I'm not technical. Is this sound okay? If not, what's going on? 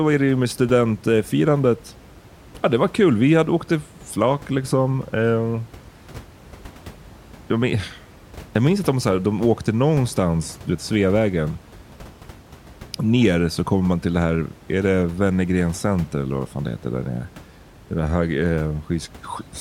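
Yes, nothing in this speech clip points to a fault in the recording or playback. A little background noise from the room can be heard well below the speech, which is part of the recording itself and not a problem.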